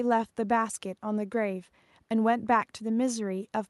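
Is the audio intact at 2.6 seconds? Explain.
Yes, at 2.6 seconds the speech is intact, with no dropout, glitch or other fault at that moment.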